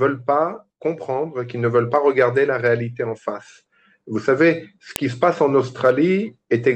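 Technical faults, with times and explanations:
4.96 s: file header played as audio. A sharp, loud click snaps out where a new piece joins. Its leftover header bytes were played as sound samples.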